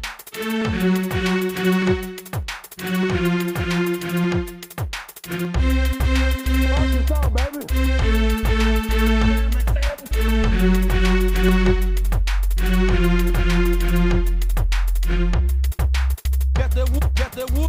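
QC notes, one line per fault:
0.62 to 17.53 s, clock drift buffer slips: a click recurs every 0.604 s, about thirty in all. The likely cause is two clocks disagreeing by several hundred ppm. The buffer between them overflows or runs dry, so a tiny block, fitting roughly 15 samples, is dropped or repeated.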